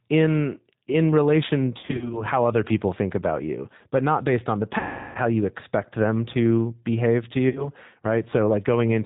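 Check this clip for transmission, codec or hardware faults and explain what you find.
Yes, there's trouble here, both throughout and in three specific spots.

The whole clip has been through a G.729 codec, and the damage is plainly audible. It sounds like the 8 kbit/s G.729A variant. The speech is rebuilt from a vocal tract filter, a pitch predictor and a few pulses per frame, so it comes across rough and slightly synthetic, with nothing above 4 kHz.

There's also VoIP packet loss concealed by the speech codec at three points. From 1.79 to 2.22 s, about 140 ms goes missing in short gaps of up to 40 ms. From 4.79 to 5.19 s, roughly 360 ms drops out. From 7.49 to 7.69 s, about 60 ms is lost. Each time, the decoder stretches its last pitch and filter into a fading buzzy tone or coloured noise, and the speech stays weak for a moment after packets return.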